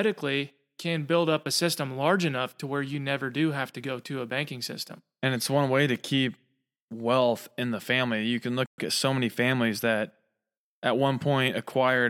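At 8.66 s the speech just cuts out, dead silence for about 120 ms, until 8.78 s. That's a playback stall: the output had nothing to play for a moment, most likely because the player's buffer ran dry or its audio thread got held up. It's short, but it lands mid-flow, so you hear a clear hole rather than a natural pause, and then the speech resumes.

Right after that, from 8.78 s to about 9.96 s, you get time-compressed catch-up. The player is clawing back the time it lost by snipping out tiny slices and cross-fading over the joins, so the speech runs about 1.1 times faster for just over a second. Pitch stays where it should, but the delivery sounds a bit rushed.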